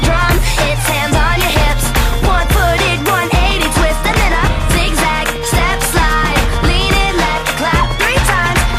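DAB burbling at 1.40–1.67, 3.35–3.76, 5.29–5.65 and 7.75–7.92 s: bit errors slip past correction into MP2 sub-band data, producing short blips of noise in single sub-bands, visible as scattered blocky bands flickering on the spectrogram.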